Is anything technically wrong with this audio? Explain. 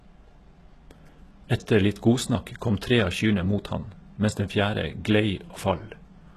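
Yes. Throughout the speech, the treble points to likely HE-AAC compression at a very low bitrate, around 16 kbps: only the lower spectrum is truly coded, and the treble up to a 12.3 kHz ceiling is copied upward from below, so s sounds come out gritty, metallic or lispy.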